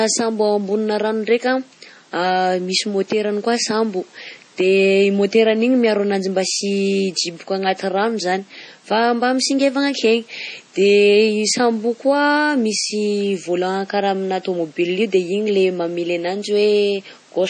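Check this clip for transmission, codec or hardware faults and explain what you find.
There's one fault, and it runs the whole way through the speech. It sounds like MP3 compression: heavy watery, swirly artefacts, most likely from an encoder starved of bits, which fits a low rate around 32 kbps. Room noise sits about 34 dB below the speech.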